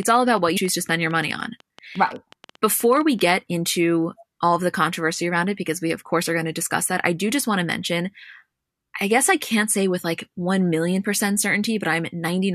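Something was likely injecting pulses into the signal path from the very start, such as interference from nearby equipment or a faulty connection or power supply. The result is a train of clicks running from 0.00 s to 3.20 s, about 9.4 per second at an uneven pace, roughly thirty in all. Each click peaks at about the level of the speech itself, so they read as a busy ticking laid over the talking and the gaps between phrases.

Within that stretch, from 0.56 s to 0.58 s, there is damaged data in the compressed stream. Part of the encoded data at that point was corrupted, so the decoder misread the affected frame, lost its place and had to search for the next valid frame header before resuming. For about 20 ms the speech gives way to a brief glitch as playback picks up again.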